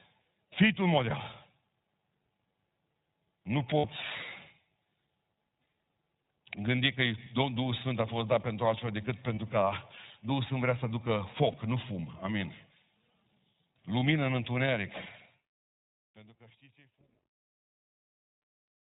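The speech runs through the iLBC codec for its whole length, and the damage is plainly audible. The codec cuts everything above 4 kHz and rebuilds each 20 ms frame's excitation on its own, leaving a thin, slightly rough, synthetic tone. The rate fits the 15.2 kbps mode.

Lost iLBC frames break in at 3.78 s for 60 ms, 6.76 s for 20 ms, 9.34 s for 40 ms, 11.52 s for 20 ms just after "vrea să aducă", and 14.0 s for 20 ms. Each gap is filled with a held, faintly buzzy repetition of the last pitch cycle. Unlike a dropout to silence, the gap carries sound, and the voice is clean again straight after.

Truncation distortion on a fade sets in from 14.69 s to the end, during the fade-out. The fade is truncated without dither, which fits a 12-bit stage. The level steps coarsely, and from 16.2 s it turns gritty. Unlike codec roughness, the grit grows as the level drops.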